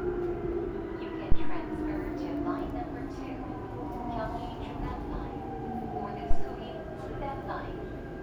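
At 1.32 s there's a phantom power thump, a deep low thud peaking at about -11 dBFS that dies away in roughly 86 ms. It's what you get when supply voltage is switched on a live input and the step pushes through the coupling capacitors. A second one lands at 6.31 s, same peak of about -11 dBFS but tighter, decaying in about 37 ms, so it reads as a shorter bump.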